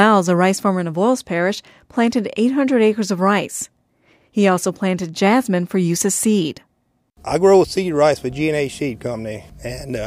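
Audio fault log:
No technical faults are audible anywhere in the clip; the signal carries through without interruption, level problems or added disturbances.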